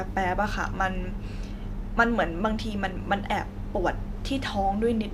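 Nothing technically wrong turns up anywhere in this short speech recording, so there's no fault to point to, no time to mark and no cause to explain.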